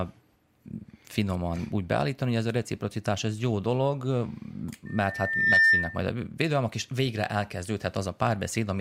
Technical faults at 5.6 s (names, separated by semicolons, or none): loudspeaker feedback squeal